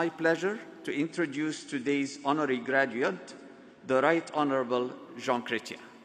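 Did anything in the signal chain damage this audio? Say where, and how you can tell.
Yes. The damage sits at the network and codec stage: an adaptive stream at a lower bitrate. From 0.97 s to 4.97 s the treble abruptly collapses, with nothing above 9 kHz, and compression artefacts thicken. Then full bandwidth returns just as suddenly. The switch fits a drop from roughly 96 kbit/s to 32 kbit/s AAC while the connection slowed. Unlike packet loss or buffer underrun, there is no gap or dropout, only a clean step down and back up in quality.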